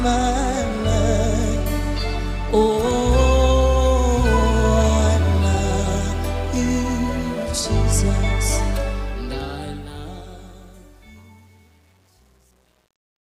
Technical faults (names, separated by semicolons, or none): truncation distortion on a fade